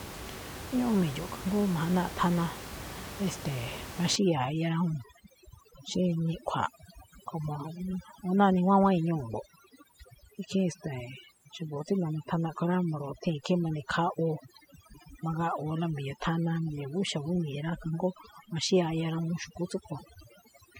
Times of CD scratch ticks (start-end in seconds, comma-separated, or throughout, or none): none